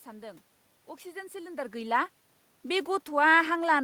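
Nothing technical goes wrong in this speech recording; the background noise is just the room, and the level shift around 1.5 s is simply the talker moving relative to the microphone.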